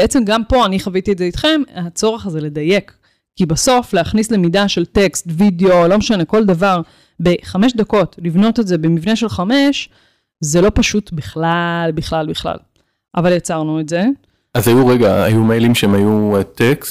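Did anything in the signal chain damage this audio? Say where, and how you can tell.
Yes. Hard clipping runs through the whole clip: the speech was driven about 8 dB past the limit of a converter or sample-format stage, so a small share of samples on the loudest syllables are cut flat, adding crackle on the peaks.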